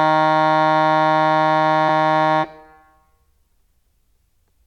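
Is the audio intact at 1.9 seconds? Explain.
No. At about 1.88 s the music drops compressed frames: a run of roughly seven whole frames never reaches the output, so playback leaps forward by around 150 ms of material. The seam at 1.88 s is a short smeared blip if the codec is lossy, where adjacent frames overlap, or a hard click if it is lossless. On a spectrogram this shows as an abrupt discontinuity in the musical content; the waveform shows a sudden change in envelope.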